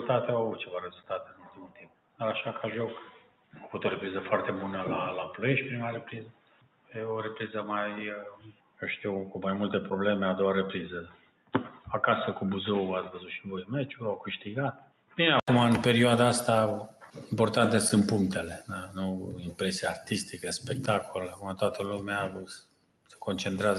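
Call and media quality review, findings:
Noise suppressor applied to music or sounds, throughout: held tones, ambience and tails get treated as noise and ducked, swinging level by roughly 10 dB, so the sound pumps and thins while attacks pass.

Input switched to a poorer device, 0–15.48 s: narrower band, dull and boxy, with a noise floor about 45 dB down. It clears at 15.48 s after an 80 ms gap at unchanged level. Likely a switch back from a headset call profile.

Sound cut by the noise suppressor at 0.9–2.2, 3.11–3.61, 6.27–6.95, 8.36–8.82, 11.08–11.86, 14.73–15.18, 16.9–17.16 and 22.64–23.15 s: sustained and decaying parts drop about 12 dB (about 10 dB at 16.9 s), cutting tails short.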